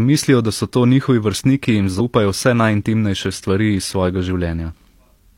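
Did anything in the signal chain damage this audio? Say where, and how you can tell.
Yes, at the codec or storage stage: damaged data in a compressed stream. Right after "njihovi vrstniki jim", from 1.95 to 2.01 s, the speech breaks up in a short decoding glitch, and a second blip follows from 4.69 to 4.73 s. The decoder hit corrupted frames, produced garbage, then lost sync and resynchronised at the next header. A network dropout leaves silence or a smoothed gap, but here the damage comes from misread frames inside the stream itself.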